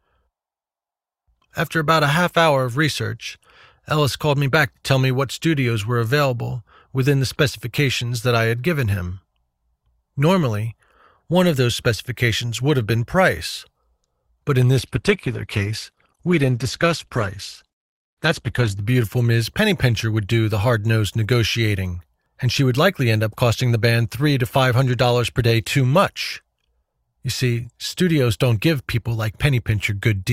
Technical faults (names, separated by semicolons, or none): adaptive stream at a lower bitrate